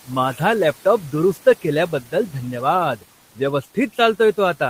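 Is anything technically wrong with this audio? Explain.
Yes. Between 1.92 and 2.13 s the speech is cut by the noise suppressor. The suppressor mistook part of the speech for background noise and pulled it down, by about 10 dB at the deepest point. Only about a tenth of a second is actually affected within that span. The quieter parts of the speech there sound swallowed and faint. The room noise sits about 23 dB below the speech.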